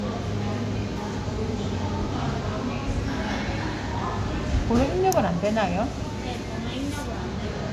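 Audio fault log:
Nothing stood out on listening to these sounds.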